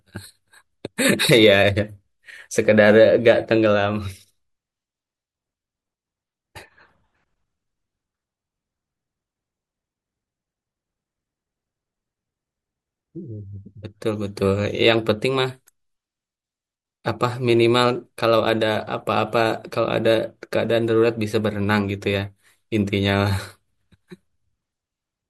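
No technical faults are audible in this speech.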